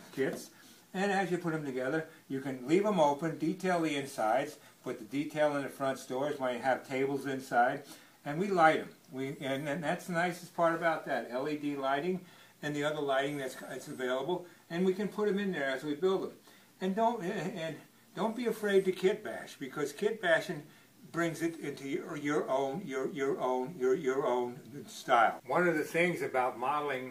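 Listening closely, nothing in the audio stood out as a technical problem.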